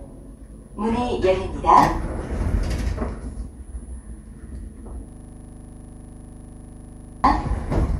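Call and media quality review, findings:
System hang loop, 5.09 to 7.24 s. A 40 ms slice of audio repeats 54 times, giving a rough buzz at 25 Hz. Probable component: audio driver or host. The system stalled while the hardware kept replaying one ring buffer.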